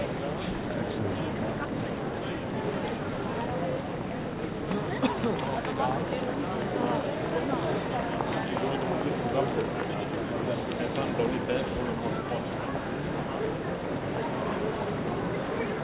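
A recording of sounds, and there's nothing technically wrong with it that a listener would catch anywhere along the way.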